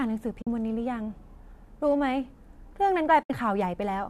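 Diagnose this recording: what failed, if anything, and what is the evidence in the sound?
The failure is AAC frame loss with muting at the network-to-decoder stage. The speech drops into two soft-edged silences, from 0.42 to 0.47 s (about 50 ms) and from 3.23 to 3.30 s (about 70 ms), each fading out and back in. That fits runs of roughly five and seven missing 10 ms frames, which the decoder replaced with zeroed spectrum while the overlapping windows smoothed the edges. The light coding texture underneath likely comes from low-delay AAC.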